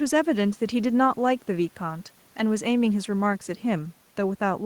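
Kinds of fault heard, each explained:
No faults are heard.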